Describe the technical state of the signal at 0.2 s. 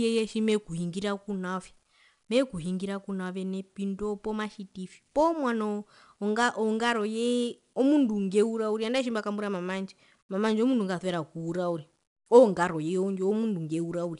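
At 0.2 s the speech carries 4-bit ADPCM compression, present throughout the clip. Each sample is coded as a coarse step from a prediction, leaving a gritty hiss that rises and falls with the speech level and distortion on sharp attacks. Nothing is heard above 10.6 kHz, which fits a rate near 89 kbps. Unlike the swirly, watery artefacts of a transform codec, this is broadband grit that tracks the signal.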